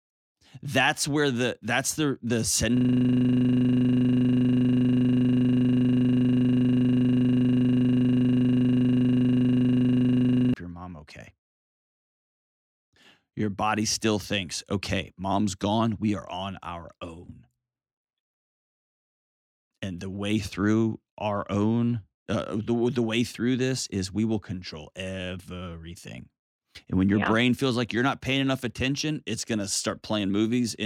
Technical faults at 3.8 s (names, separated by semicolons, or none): system hang loop